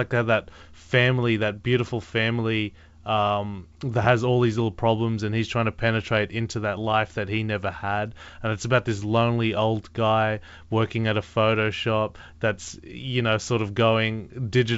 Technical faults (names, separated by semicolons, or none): none